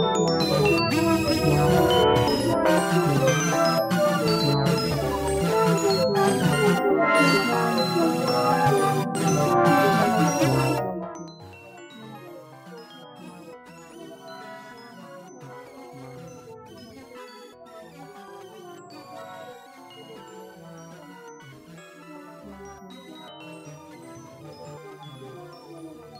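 No technical faults can be heard anywhere in the recording, and the level changes that do occur move smoothly, the way a fader would.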